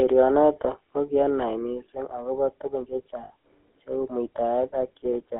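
Throughout, the speech sounds buzzy and gravelly within a narrow 300 Hz to 3.4 kHz band: plainly audible GSM full-rate codec damage, consistent with 13 kbps pulse-excited coding. From 3.24 to 3.31 s, just after "kokianai missing akobo tukun", a brief metallic ring holds the sound: lost GSM frames, about 60 ms, concealed by repeating the last good frame.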